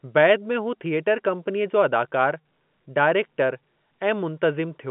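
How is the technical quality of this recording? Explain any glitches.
No glitches stand out; the speech sits in the narrow telephone band of G.711 A-law coding, roughly 150 Hz to 3.4 kHz, and nothing in it registers as a fault.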